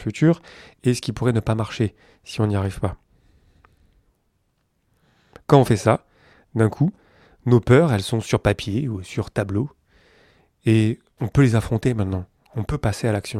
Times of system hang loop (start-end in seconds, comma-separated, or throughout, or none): none